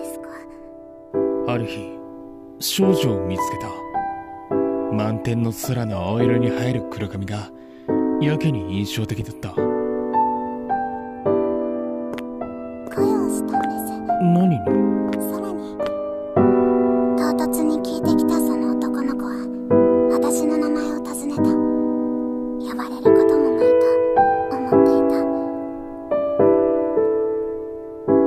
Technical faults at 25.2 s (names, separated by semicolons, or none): sudden gain jump